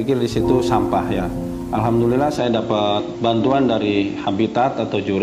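At 2.38 s the sound turns duller with nothing above 7.6 kHz and a faint new background hiss, with no gap or level jump. Likely an input switched to a poorer device.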